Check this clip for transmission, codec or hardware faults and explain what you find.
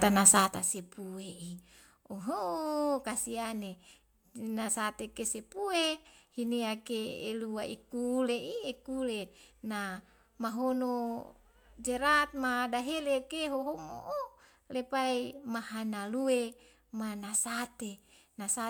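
No transmission, codec or hardware faults are audible in the speech anywhere in the clip.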